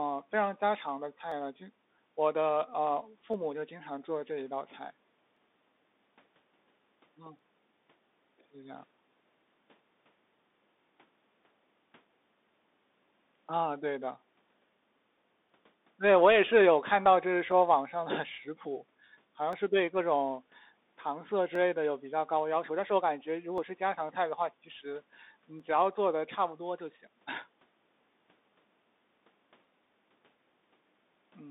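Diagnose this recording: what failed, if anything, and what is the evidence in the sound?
The codec stage is a Bluetooth CVSD headset link. The speech is confined to about 200 Hz to 3.7 kHz, with nothing above 3.8 kHz, and the damage is plain: scratchy s sounds and a grainy hiss underneath. CVSD sends one up-or-down bit per sample at 64 kHz, and its adaptive step can't keep up with loud high content.

At the driver or buffer stage there's a click every 2.02 s, running from 1.32 s to 29.64 s, around fifteen in all. That regular spacing is the signature of clock drift buffer slips, likely two device clocks disagreeing by a couple of hundred ppm, so the buffer drops or repeats a small block of samples each time.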